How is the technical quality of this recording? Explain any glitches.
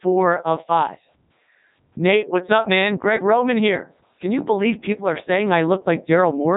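Poor: the whole recording has passed through a very low-bitrate speech vocoder. Codec 2 vocoder damage, present throughout the 6.6-second clip, is heavy and fits the top 3.2 kbit/s mode. The codec discards the original waveform and keeps only pitch, voicing, loudness and a coarse spectral shape, and the decoder rebuilds the speech from sine waves. That resynthesis makes the speech sound robotic and buzzy. Nothing survives above 3.8 kHz, so the sound is also dull and narrowband.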